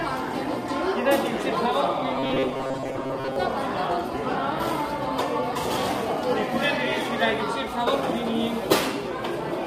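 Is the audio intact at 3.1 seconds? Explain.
No. At 3.1 seconds the sound collapses into a rigid, metallic buzz pitched at 133 Hz, part of a robotic stretch from 2.15 to 3.36 s caused by repeated short buffers. The likely cause is audio arriving too seldom, so the player loops its last fragment for most of that span. A roughly 7.5 ms period fits that buzz, while the real audio is skipped. Underneath, throughout the clip, the sound is rough and grainy, with noise filling gaps and a thin, artificial top end, plainly audible damage from low-delay AAC compression. It is likely AAC-ELD at a low bitrate, around 32 kbps, whose short frames resolve fine spectral detail poorly.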